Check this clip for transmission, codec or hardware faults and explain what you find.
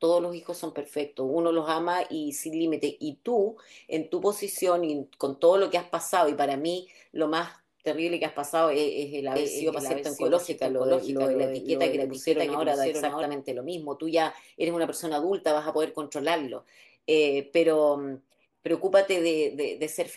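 A doubled audio track runs from 9.36 s to 13.24 s. During that span a second, full-band copy of the speech sits about half a second behind the original and a few decibels quieter, likely because the same signal reached the mix twice through paths with different delays. It sounds like a dry, clean repeat with no room tail, cutting in and out abruptly at the edges of that stretch.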